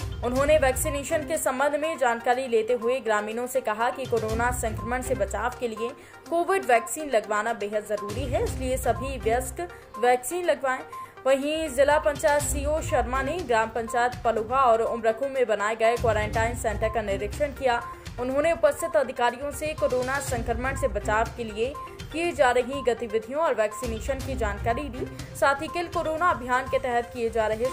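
No technical faults can be heard anywhere in this recording. Nothing in the audio points to a fault at any moment.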